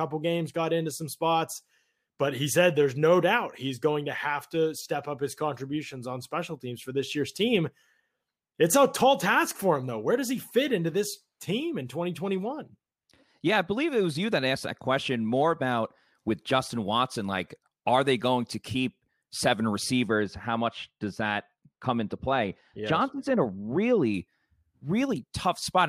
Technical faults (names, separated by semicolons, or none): de-emphasis applied wrongly